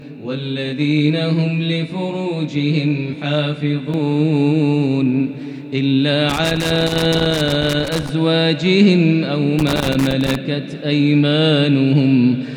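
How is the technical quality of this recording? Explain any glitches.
The recording has two technical faults: a comb-filtered opening and two bursts of connector crackle.

From 0.0 to 3.9 s there is channel delay with comb filtering. One channel runs roughly 20 ms behind the other, and when the two are summed to mono, shared content cancels at regularly spaced frequencies starting near 30 Hz. The result is a rough, slightly doubled sound.

From 6.29 to 8.09 s and again from 9.59 to 10.35 s there is loose connector crackle. A contact in the signal path repeatedly makes and breaks, chopping the audio. Each stretch is heard as an irregular burst of scratchy crackle over the sound.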